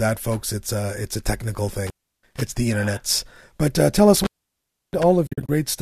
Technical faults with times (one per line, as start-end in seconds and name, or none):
1.72-2.41 intermittent contact
4.16-5.03 intermittent contact
5.26-5.49 AAC frame loss with muting